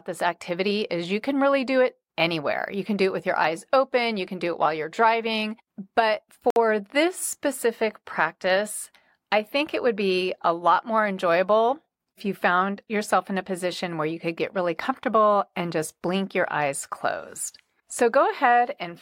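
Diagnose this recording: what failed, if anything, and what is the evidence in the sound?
At 6.50 to 6.56 s the speech drops to silence for 58 ms, then resumes with "this specific practice I". The fault sits in playback over a wireless link, likely a Bluetooth stall: radio interference delayed packets, the headphones' buffer emptied and output paused until retransmissions arrived. Unlike network packet-loss concealment, the gap is not filled with smeared or repeated sound. It is a clean cut to silence followed by an abrupt restart.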